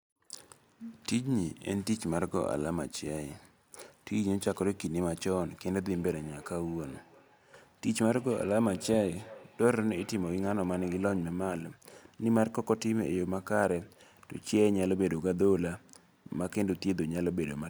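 From 5.83 to 11.37 s, speech returns faintly, about 22 dB down, roughly a third of a second later: feedback echo between two devices, one microphone re-capturing another's playback.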